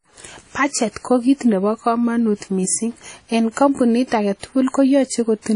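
Across the whole speech clip the sound is washy and ringing, with a hiss that swells and fades along with the speech and nothing above about 10.1 kHz. This is likely WMA compression, its long transform blocks smearing quantisation noise, at a rate that fits 32 kbps.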